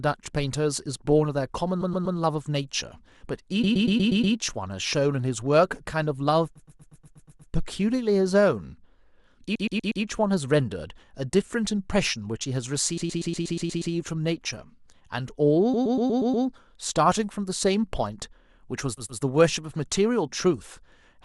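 A run of compressed frames was sent repeatedly, so the decoder replays the same 120 ms block in a stutter of repeated frames at 1.81–2.17, 3.63–4.35, 6.55–7.51, 9.55–10.03, 12.97–13.93, 15.73–16.45 and 18.97–19.21 s, stretching the speech by 240 to 960 ms each time.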